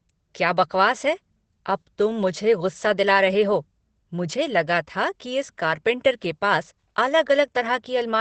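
Throughout the clip, the speech has passed through Opus voice compression running in its SILK linear-prediction mode with a wideband setting. Nothing is left above about 8.6 kHz, and the coarse excitation coding is plainly audible, which fits a low rate of around 12 kbps. The voice comes out muffled and dull, with a hoarse, faintly robotic edge where the fine detail of the excitation has been thrown away.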